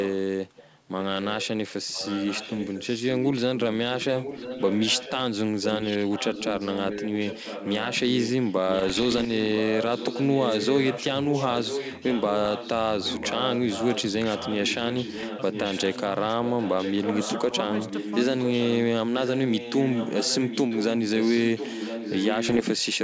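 A delayed copy of the speech trails the talker by almost exactly one second, sitting about 10 dB below it (about 15 dB down from 0.57 to 1.47 s). It is heard from 0.0 to 0.15 s, 0.57 to 1.47 s, 1.9 to 5.21 s, 5.62 to 12.71 s, 13.04 to 18.75 s and 19.18 to 22.98 s. This is echo leak, likely a loudspeaker on the far end whose echo canceller let part of the playback return down the line.

Between 0.49 and 0.88 s the talker's level dips by up to about 5 dB, in pieces totalling roughly a tenth of a second. This is speech suppressed in double talk. The canceller likely could not separate the live voice from the echo and turned both down.

Pops and rough, gritty bursts with brief jumps in level come at 8.65 to 9.30 s, 12.36 to 12.50 s, 15.18 to 15.28 s and 22.49 to 22.62 s. These are bit errors on an ADPCM link. Each flipped bit throws the decoder's step size and predictor off, so every hit rings on for a few milliseconds. 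The error rate is a fraction of a percent. The link's wideband coding fits G.722 at its full 64 kbit/s, with speech clear up to about 7 kHz.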